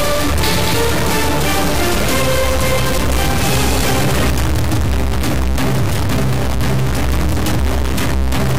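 From start to finish there's a harsh, buzzy distortion riding on everything, and even the quiet gaps aren't quiet: they fill with a gritty noise floor. That pattern points to a stuck bit, most likely a single data line or converter bit jammed at one value. About half the samples get knocked off by a step of around -15 dBFS, which is a fairly high bit, so both the buzz and the noise in the pauses come through loud.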